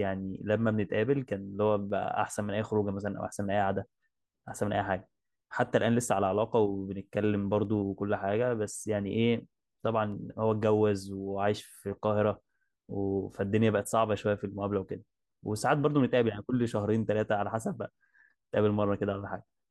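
Sharp single clicks occur at 1.90, 7.65 and 10.12 s in the speech. Each is likely dropped samples: a fraction of a millisecond vanishes, so the waveform jumps.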